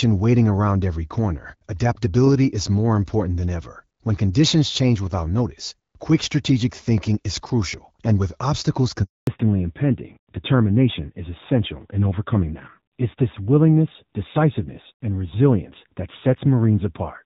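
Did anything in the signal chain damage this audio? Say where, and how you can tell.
Yes, and it happens at the network stage, mid-call. Right after "crucial and with obstacles" there's a handover gap from about 9.03 to 9.27 s: the audio fades out within a few tens of milliseconds and stays dead for roughly 240 ms. That's the call being passed from one network link to another with no speech frames arriving while it switched, so whatever was said in that window is simply gone, not muffled or garbled.

The second problem starts the instant the audio returns at 9.27 s and runs to the end: a fallback to narrowband. Before the gap, the AMR-WB HD Voice coding sounds clear, with only light codec roughness, which fits a rate of about 12.65 kbit/s. Afterwards, nothing above 4 kHz survives, and the sound turns duller and grittier. That points to the handover renegotiating the call down to AMR-NB, likely at around 7.4 kbit/s.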